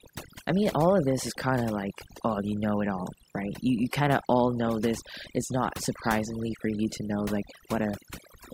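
From start to finish the speech carries overdone noise removal. A noise reducer set far too hard switches individual frequency bands down whenever they sit near its noise estimate, taking quiet speech detail with them. Gaps fall to near silence with twinkling specks.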